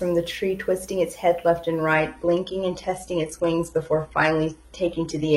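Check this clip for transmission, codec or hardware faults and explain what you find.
There is one fault, an adaptive stream at a lower bitrate. At 1.94 s the quality drops suddenly and stays low to the end of the clip. There is no gap at the switch. The stream fell back to a cheaper version when the connection slowed. Nothing remains above 11.8 kHz. The artefacts point to a switch from AAC-LC near 96 kbit/s to HE-AAC near 16 kbit/s.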